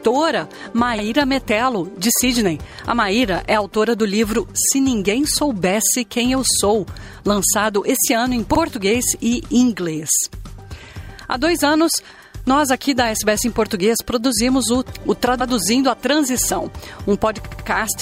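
Repeated frames cause stutters at 0.97 s, where a 48 ms block plays twice; at 15.40 s, with a 96 ms block doubled; and at 17.44 to 17.65 s, where a 72 ms block sounds four times. Compressed frames were duplicated, so the decoder replays them.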